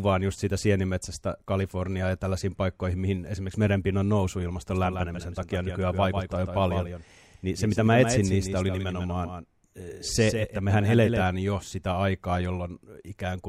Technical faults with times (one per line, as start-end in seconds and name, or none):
4.70-11.22 doubled audio track